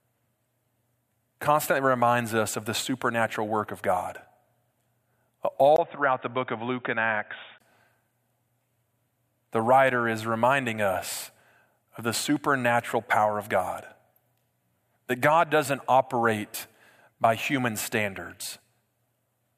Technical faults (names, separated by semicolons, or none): input switched to a poorer device